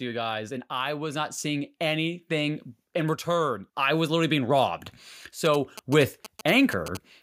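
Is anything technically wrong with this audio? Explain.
Yes, two faults. Right after "you guys and", from 0.68 to 4.78 s, there is an automatic gain rising: the gain control judged the input too quiet and slowly raised it by about 8 dB, so voice and room noise swell together over four seconds, unlike a speaker moving closer, which changes tone. From 5.45 to 6.97 s, GSM signalling bursts from a nearby 2G phone are rectified by the audio circuit into a galloping dit-dit-dit of short 217 Hz buzzes, well below the speech. Their stuttering on-off rhythm sets them apart from steady mains hum.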